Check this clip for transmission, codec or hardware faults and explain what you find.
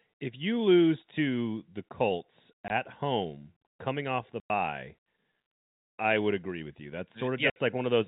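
The speech breaks up three times with hard-edged holes of pure silence: 2.68 to 2.70 s (20 ms), 4.40 to 4.50 s (100 ms) and 7.50 to 7.56 s (60 ms). This is packet loss filled with silence. Lengths in steps of 20 ms point to 20 ms packets, with the receiver inserting nothing where audio went missing. The band stops at 4 kHz, as expected from the G.711 telephone coding carrying the call.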